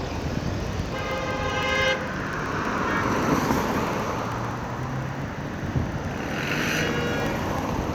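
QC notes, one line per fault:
0.09–7.84 s, periodic USB or driver dropouts: a steady train of ticks, one every 64 ms (about 15.6 per second), around a hundred in all, audible only where there is signal. Each time, the audio path stalls and roughly half a millisecond of samples is replaced by silence. The sudden break in the waveform and the jump back produce a click, and the strict spacing suggests a background task blocking the bus or driver on a fixed schedule.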